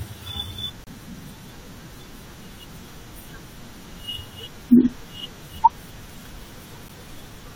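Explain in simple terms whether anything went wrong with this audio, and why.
Two brief, hard-edged dropouts of silence break into the speech: about 29 milliseconds at 0.84 s and a shorter one at 6.89 s. This is a gap between stream segments: the audio arrives in six-second pieces whose timing doesn't quite join, so the player fills each seam with silence. Nothing is actually lost.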